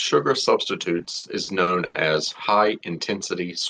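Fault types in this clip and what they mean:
Repeated stalls (stutter): Packets arrived late, so the jitter buffer kept running dry. Between 0.97 and 1.96 s the receiver stretched the last sound across eight gaps, the longest 90 ms, filling about a quarter of that stretch. Nothing is lost, but the speech drags and stumbles.
Jitter buffer slow-down: The buffer was short of reserve, so the receiver repeated single pitch periods to gain time. From 3.19 to 3.55 s this adds 36 ms, playing the speech at 92% speed. Sounds are drawn out while the pitch stays the same.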